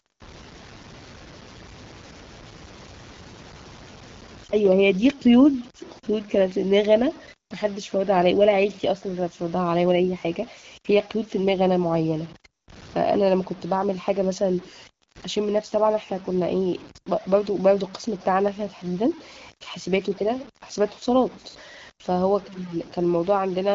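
Gritty, grainy distortion runs through the whole speech clip, tracking the signal and fairly loud, likely low bit depth without dither from truncation to about 6 bits.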